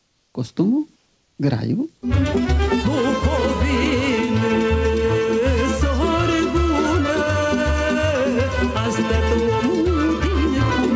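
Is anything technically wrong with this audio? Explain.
Yes. From 0 to 0.34 s and from 0.96 to 1.38 s, the background becomes comfort noise: a steady, featureless hiss about 3 dB quieter than the real background. The likely cause is discontinuous transmission, where the sender pauses during quiet moments and the receiver synthesises matching noise. Unlike a gate or dropout, the background is replaced rather than silenced. The sound carries nothing above 8 kHz, which fits a wideband call codec.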